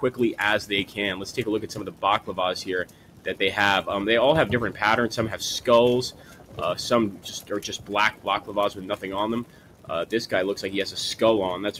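A noise suppressor built for speech stays active on this sound for the whole clip. It treats steady tones, ambience and decaying tails as noise, so its gain keeps moving, with swings of roughly 10 dB between passed and suppressed passages. Sharp onsets get through at close to full level while sustained parts sink behind them, which gives the clip an uneven, pumping quality and a thinned-out body.

The clearest cases of sound cut by the noise suppressor fall at 1.63–2.03 s, 2.85–3.27 s, 6.11–6.61 s, 7.11–7.51 s, 7.75–7.91 s, 8.12–8.53 s, 8.70–9.04 s and 9.43–9.90 s. In each one the suppressor decides the held or fading material is noise and pulls it down by about 10 dB, or about 9 dB at 8.70 s. Decays are cut short and level drops suddenly, so from 7.11 s onward the drops come close together and the sound flutters.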